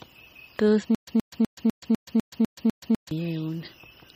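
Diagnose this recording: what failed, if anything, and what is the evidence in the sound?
The sound has plainly audible MP3 compression damage, likely from the codec stage at a low bitrate: the watery, swirling quality fits an encoder starved to around 32 kbps. On a spectrogram, energy stops at a hard horizontal ceiling near 15.2 kHz, and below it weak bins blink on and off between frames in a patchy mosaic. That happens because the encoder drops the treble outright and zeroes spectral lines its hearing model judges expendable.

From 0.95 s to 3.11 s there is a stutter with silent gaps, most likely a stalled playback or stream buffer. A burst of about 124 ms repeats eight times, each followed by about 126 ms of digital silence, for an even 250 ms cycle. On the waveform this appears as identical blocks alternating with flat zero-line stretches. Each retry replayed the last fragment and then ran dry, so the audio that belonged in that span is missing.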